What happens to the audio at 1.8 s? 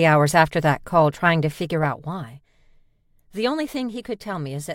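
A level drop of roughly 10 dB is being applied in discrete steps with no smoothing, at something like 150 steps a second, from 1.41 to 2.35 s. Each jump clicks faintly, so zipper noise rides on the sound as a fine ticking buzz while the level falls.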